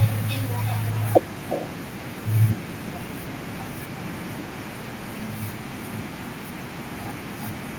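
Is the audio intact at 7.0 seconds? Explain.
No. At 7.0 s, as through the whole clip, there's mains hum: a steady 60 Hz tone from a ground loop or nearby transformer, sitting roughly 20 dB under the speech. There's also echo with no canceller, since the far end's loudspeaker feeds back into its microphone unremoved, so the speech is shadowed around 0.4 s later by a thinner copy about 16 dB down.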